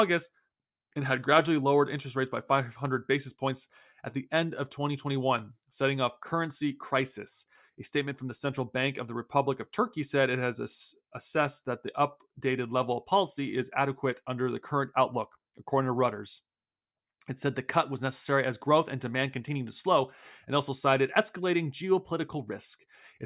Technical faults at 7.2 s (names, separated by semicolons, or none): none